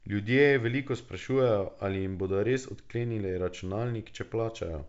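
Nothing stood out on listening to this speech recording, whose band limit of about 7 kHz fits G.722 wideband telephone coding at its full 64 kbit/s rate.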